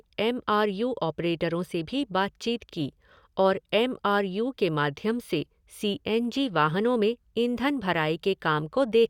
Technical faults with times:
none

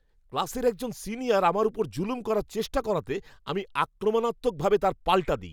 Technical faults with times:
none

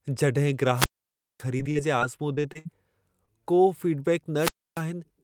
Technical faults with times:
0.74-1.44 wireless microphone squelch dropout
1.57-2.67 repeated packet loss (robotic sound)
3.25-3.29 short concealed packet loss
4.36-4.84 wireless microphone squelch dropout

